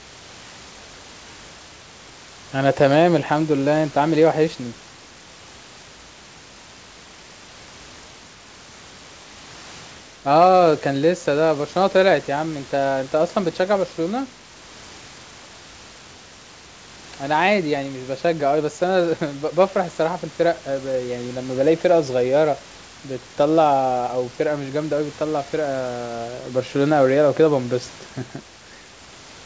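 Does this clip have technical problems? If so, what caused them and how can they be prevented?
No, nothing in this recording points to a technical fault.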